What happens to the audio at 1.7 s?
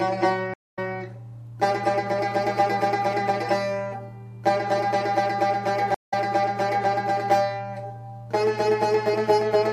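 Nothing goes wrong at 1.7 s; the audio plays through that moment intact, with no dropout, click or distortion.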